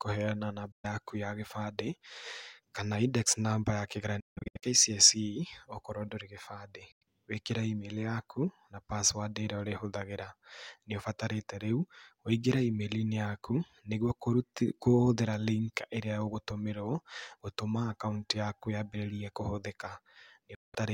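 The speech cuts out four times. At 0.72 s there is a silent gap of about 0.12 s. From 4.20 to 4.64 s the sound breaks into several short holes, the longest about 0.16 s. Further gaps come at 6.92 s, about 0.09 s, and at 20.55 s, about 0.19 s. The speech resumes further along, as if it kept playing. This is likely a Bluetooth dropout, with late packets discarded.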